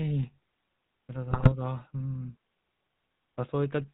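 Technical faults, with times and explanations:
throughout: GSM full-rate codec. The sound has the gravelly, buzzy roughness of the original GSM coder, and nothing above 4 kHz survives. The coder rebuilds the voice from a vocal-tract filter driven by a sparse train of regularly spaced pulses, so breathiness and fine harmonic detail turn into a grainy buzz. The damage is plainly audible and fits the 13 kbps full-rate coder. A simple telephone band-pass filter would dull the sound but leave no such grit.
1.30–1.52 s: GSM bit errors. For about a fifth of a second the audio breaks into squawks, pops and gargling. Corrupted bits reach the decoder, and wrong filter, pitch and gain values warp the spectrum and make the level jump from one frame to the next. The span fits roughly eight 20 ms frames on a badly degraded link. Packet loss would bring silence, or a smoothed repeat of the last sound, not these harsh, distorted bursts.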